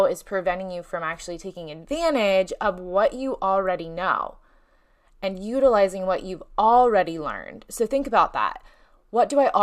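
No technical faults are audible.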